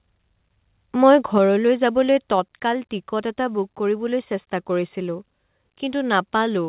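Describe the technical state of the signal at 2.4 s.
At 2.4 s the level of the speech and the background drops together by about 3 dB in a single step, which is likely the call software stepping the microphone volume down after judging the input too hot. The change is immediate, with no fade, so everything from "টিকট এটা" onward sits audibly lower than what came before. The call path's narrow band, with nothing above 4 kHz, stays the same across the step.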